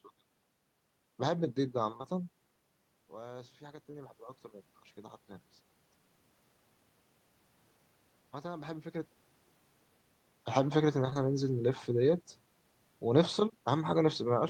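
At 1.97 s the speech has short concealed packet loss: two consecutive 20 ms stretches, ending at 2.06 s, failed to arrive at the decoder in time. The receiver bridged the gap by extending the preceding sound and then crossfading back into the received signal, so the passage smears briefly rather than dropping out. This occurs just as the talker moves relative to the microphone, around 2 s, which makes the level shift there. A single 20 ms loss follows at 3.92 s, and another pair spans 11.10 to 11.17 s. Each is heard as a brief smear or wobble.

From 3.07 to 4.24 s, automatic gain rising follows an input drop of about 16 dB. The gain control responds by raising its gain by about 4 dB over roughly a second. Because this is gain applied to the whole signal, speech and room noise swell together, and the rise is gradual rather than a step. The concealed gap at 3.92 s falls inside this ramp.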